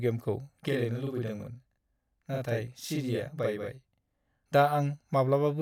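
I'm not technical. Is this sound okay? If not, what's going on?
No. From 0.68 to 4.47 s there's a channel delay (doubling): one side lags about 43 ms, which fits a 2048-sample buffer, so the speech sounds doubled.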